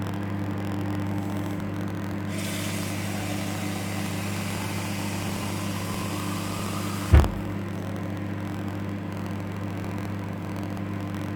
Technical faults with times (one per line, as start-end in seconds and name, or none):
0.00-11.35 buffer tearing